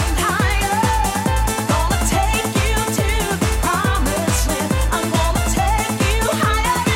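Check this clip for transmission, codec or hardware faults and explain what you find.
Nothing faulty can be heard anywhere in this audio.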